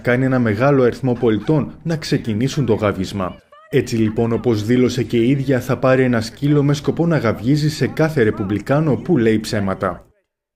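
No technical faults can be heard anywhere in this audio.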